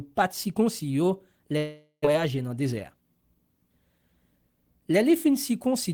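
From 1.57 to 2.15 s the speech breaks in a long network dropout, likely from lost packets: a fading concealment buzz, then silence, with about 0.4 s missing. From 2.63 to 3.02 s a jitter buffer speed-up trims around 50 ms of pitch periods, so speech runs at 112% speed with unchanged pitch.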